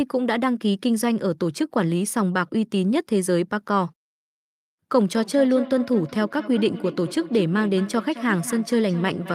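It's a speech clip, and from about 5.16 s right through to the end you get feedback echo between two devices. Each phrase comes back roughly a fifth of a second later, thinner and a bit ringy, peaking at about 13 dB under the speech. That's what happens when a second device in the same room replays the call and the mic grabs it again; the echo canceller only knows about its own speaker, so it can't strip it out.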